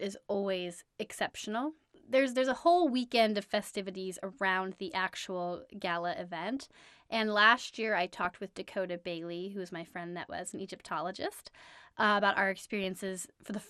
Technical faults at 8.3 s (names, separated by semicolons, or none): MP2 compression; DAB burbling